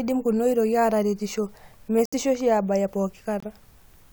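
At 2.06 s and 3.40 s, the speech cuts abruptly to silence for 86 ms, then 42 ms. Corrupt frame muted: the decoder rejected damaged frames, and silence filled their place.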